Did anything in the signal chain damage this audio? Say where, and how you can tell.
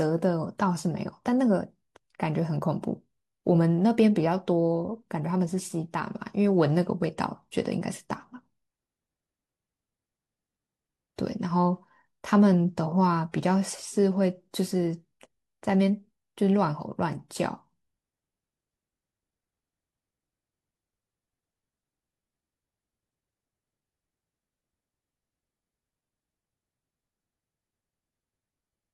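No, nothing in the signal chain damaged this audio.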